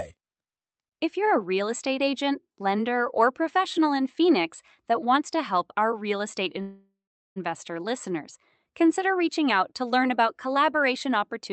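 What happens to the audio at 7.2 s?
At 7.2 s you're in the middle of a call audio freeze running from 6.61 to 7.38 s, right after "help our real estate". The last sound smears into a fading buzz, then goes silent for about 0.4 s. It's likely packets held up until the jitter buffer ran dry. The speech then resumes where it stopped, with nothing lost, just delayed by about 0.75 s.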